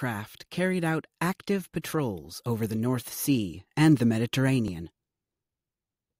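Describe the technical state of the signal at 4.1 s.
The speech signal at 4.1 s is intact, with no fault audible at that point.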